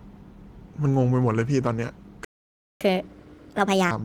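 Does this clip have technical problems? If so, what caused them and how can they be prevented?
Yes. The speech cuts to silence from 2.25 to 2.81 s, a gap of about 0.56 s, before resuming. This playback stall was likely caused by the player running out of buffered data or its audio thread being blocked. A larger playback buffer and a real-time audio thread that never waits on network or disk would prevent it.

From 2.81 to 3.91 s the speech runs at 1.5 times normal speed and sounds raised in pitch by roughly seven semitones. This is catch-up at higher speed: the player resamples its backlog faster to regain the lost time. Time-stretching that preserves pitch, or a gentler speed-up of a few percent spread over a longer stretch, would prevent the audible pitch jump.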